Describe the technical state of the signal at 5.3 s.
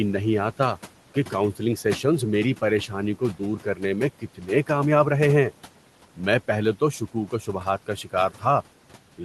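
Noise suppressor artifacts are present at 5.3 s, as they are across the whole clip. The suppressor estimates which frequency bands hold steady background noise and pulls them down frame by frame, here by about 12 dB. The room noise, about 19 dB below the speech, dips between phrases and swells back under the voice, while the call path's band limit near 12 kHz dulls the top end.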